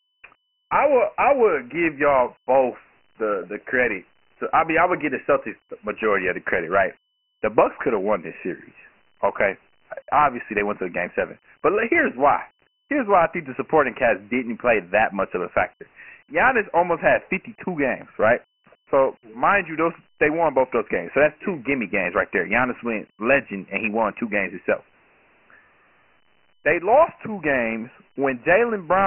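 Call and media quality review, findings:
Gritty hiss riding on the speech, throughout; band dead above 3 kHz, thin low end. Dialogic VOX ADPCM: 4-bit step-adaptive coding, fits 24 kbps at 6,000 samples a second. Heavy quantisation noise tracks the speech level.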